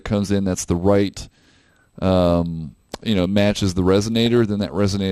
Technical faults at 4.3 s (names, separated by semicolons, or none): MP2 compression; DAB burbling